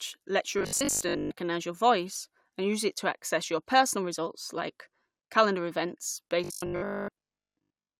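From 0.59 to 1.31 s and again from 6.44 to 7.98 s, the speech becomes a rigid, metallic 50 Hz buzz, likely robotic sound from repeated short buffers, each about 20 ms, replacing most of the real audio.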